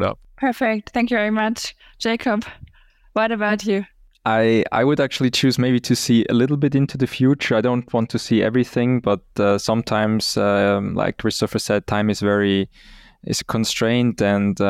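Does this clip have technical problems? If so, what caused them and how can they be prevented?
Yes. From 6.46 s to 9.04 s the speech turns dull and muffled, as if a blanket dropped over the top end, then brightens again afterwards. This is de-emphasis applied wrongly: a treble-cut filter meant to reverse pre-emphasis was run on audio that had no boost to undo, or was run a second time. The result is a smooth downward slope, about 8 dB lower at 10 kHz than at 1 kHz. Prevent it by tracking whether each stream carries pre-emphasis and applying the matching de-emphasis exactly once.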